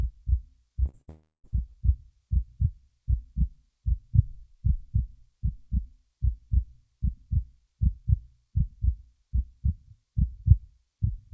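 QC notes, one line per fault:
0.86 to 0.89 s and 0.89 to 0.95 s, short concealed packet loss: about 20 ms then 40 ms never arrived, so the decoder extended the preceding sound, leaving brief smears.
1.01 to 1.09 s, burst of packet loss: roughly 60 ms lost in a row, bridged by a continuation of the last sound that fades, after which the audio resumes further on.
1.09 to 1.46 s, long network dropout: a fading buzz or hiss fills about 340 ms, ending in around 150 ms of silence, likely because no packets arrived, before the audio returns.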